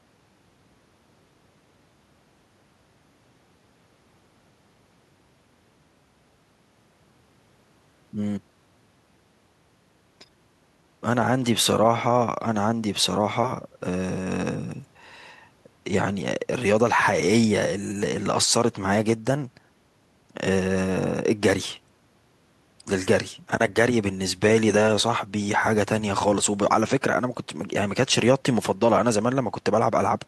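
No technical faults can be heard anywhere in the recording; the signal stays steady and intact from its first moment to its last.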